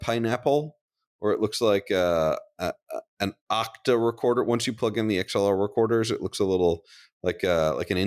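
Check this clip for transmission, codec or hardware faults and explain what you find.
Nothing stood out on listening to this speech recording.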